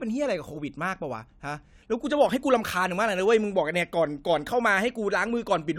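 No technical faults are audible.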